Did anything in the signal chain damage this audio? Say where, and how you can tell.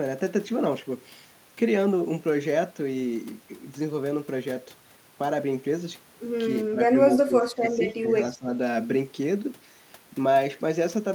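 Yes, in the call processing. From 6.7 to 6.89 s, 7.09 to 8.12 s and 8.34 to 8.52 s the speech ducks by around 15 dB in patches. That's likely speech suppressed in double talk: the echo canceller couldn't separate this talker from the far end and pulled both down.

There's also a short echo leak at 7.12 to 7.18 s, a copy of the speech trailing about 242 ms behind and roughly 10 dB below it. It's likely residual loudspeaker pickup that the far-end canceller didn't fully remove and sent back.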